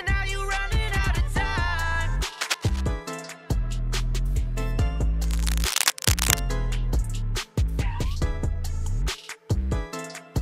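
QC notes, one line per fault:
2.40–2.81 s and 5.24–6.41 s, cable scratch noise: two bursts of dense, uneven scratching and rustling sit over the sound. The first is a little below the signal level. The second, longer one is about as loud as the signal. The likely cause is a worn cable, connector or control being moved, so its contact resistance jumps about rapidly. Unlike isolated clicks or steady crackle, the noise is clustered, irregular and confined to these spans.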